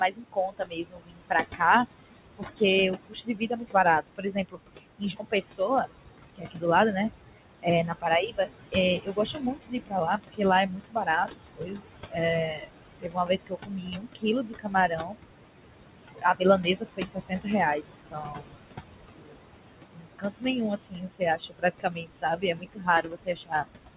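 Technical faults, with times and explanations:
Throughout, noise suppressor artifacts: the room noise, which sits about 9 dB below the speech, is pulled down by about 21 dB whenever the talker pauses, then swells back under each phrase, so the background pumps in step with the speech. Unlike clipped speech, the damage here falls mainly on the background and on the tone of the voice.
0.00–6.64 s, 7.60–15.48 s and 16.11–23.97 s, speech cut by the noise suppressor: within these spans the suppressor treats the quieter parts of the speech as noise and turns them down with the background, by up to about 22 dB. About 3 s of each of the first two spans is affected, with similar drops through the last. Soft consonants, word endings and quiet phrases sound swallowed or fade out. This sets it apart from packet loss or a dropout, where sound stops abruptly regardless of level. The top end stops near 4 kHz, which fits the narrowband call codec on this path.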